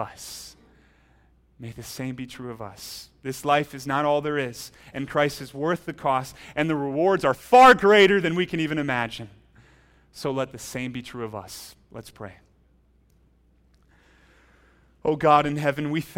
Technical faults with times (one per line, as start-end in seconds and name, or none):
none